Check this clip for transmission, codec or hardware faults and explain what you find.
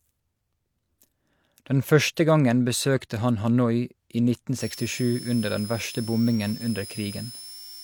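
One hardware fault appears near the end. From 4.60 s to 7.83 s there is a switching supply whistle: a power converter runs in audible burst mode or beats with another supply, adding a whine near 5 kHz that drifts between 5.1 and 5.6 kHz, roughly 15 dB below the speech.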